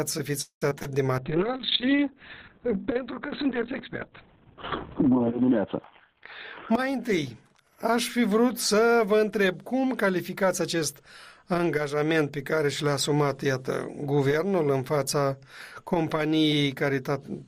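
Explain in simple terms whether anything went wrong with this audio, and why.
Several things went wrong.

From 0.41 to 0.88 s, repeated packet loss (robotic sound) leaves four gaps, the longest 0.2 s. The receiver patches them by stretching earlier sound, so this stretch sounds choppy and robotic.

From 1.19 to 7.69 s, a call bitrate drop makes the encoder use far fewer bits and cut everything above 4 kHz, so the audio turns rough and muffled.

Jitter buffer speed-up runs from 5.89 to 7.58 s (7% faster) and from 10.06 to 11.01 s (8% faster). The receiver trims tiny slices to reduce delay, so the sound plays hurried at unchanged pitch.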